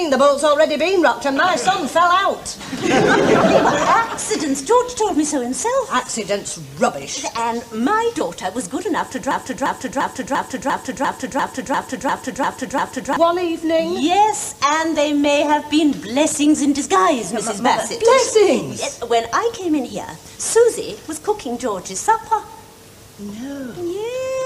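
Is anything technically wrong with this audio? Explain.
Yes, there are two faults.

From 4.96 to 5.11 s there is DAB burbling. Bit errors slipped past the error correction into the MP2 data, at a rate of only a small fraction of a percent, so single sub-bands carry wrong samples. The result is short blips of noise over the audio rather than a clean dropout.

From 9.31 to 13.17 s a broken-record loop repeats a 0.35 s fragment exactly, eleven times, back to back. The likely cause is a stall in the player, encoder or stream. Unlike an echo, nothing decays, and the audio that belonged there is lost.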